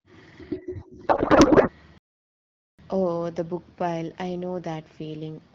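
From 1.07 to 1.70 s there is a codec payload misread: AMR frames packed octet-aligned are being read as bandwidth-efficient, so the decoder takes fields from the wrong bit positions. The speech becomes garbled noise and warble that barely tracks it. On a spectrogram the harmonic bands dissolve into smeared, noisy energy.

From 1.98 to 2.79 s a playback stall cuts the output for 0.81 s, most likely because the player ran out of data or its thread was blocked. The sound stops mid-flow, then resumes. The waveform drops to a flat line, and the spectrogram shows an empty vertical gap.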